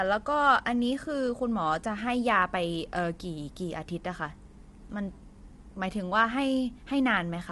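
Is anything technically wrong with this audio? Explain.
Yes. Throughout the speech there is plainly audible low-delay AAC compression, with roughness and graininess consistent with AAC-ELD at around 32 kbps. This is likely the cause. Its very short frames give poor frequency resolution, so pitch harmonics are smeared and noise fills the gaps between them. On a spectrogram, the harmonic stripes look blurred with speckled energy between them, and everything stops sharply at 11.5 kHz. The waveform itself shows nothing obvious.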